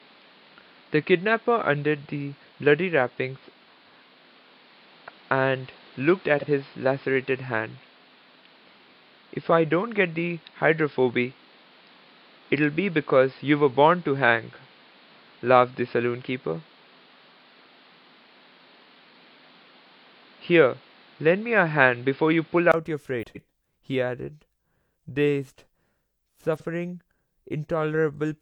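From the start until about 22.74 s the sound is dull and boxy, with nothing above roughly 5.1 kHz and a faint background noise sitting around 30 dB under the signal. At 22.74 s there's a brief gap of about 20 ms, then the top end opens up and the level shifts by around 5 dB. That pattern points to an input switched to a poorer device, likely a narrower-band mic or a headset call profile that carried the first stretch before the better input took over again.

Along the way there are four short garbled patches where frames came out of order. Two adjacent chunks of audio got swapped, so each stretch plays its halves back to front. You hear a quick flutter, but nothing goes missing. At 3.59 to 3.86 s and 23.22 to 23.48 s the swapped blocks are each about 128 ms, which fits runs of three frames. At 6.37 to 6.46 s and 26.56 to 26.65 s they're shorter, about 43 ms each, consistent with single frames.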